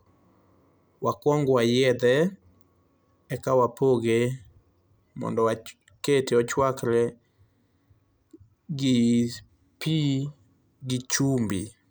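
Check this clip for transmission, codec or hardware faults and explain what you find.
Nothing turned up here: the speech comes through without any transmission, codec or hardware problems worth pointing out.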